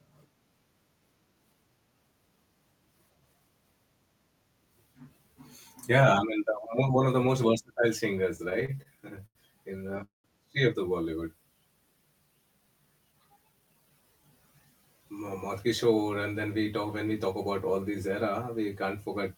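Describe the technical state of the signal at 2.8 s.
At 2.8 s the speech signal is intact, with no audible dropout, distortion or other fault at that point.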